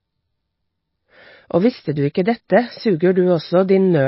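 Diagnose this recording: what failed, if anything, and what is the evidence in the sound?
Codec stage, likely MP3 compression at a starved bitrate near 24 kbps: the speech is cut off above 5.6 kHz throughout, with plainly audible swirly, watery smearing where weak frequency lines drop in and out.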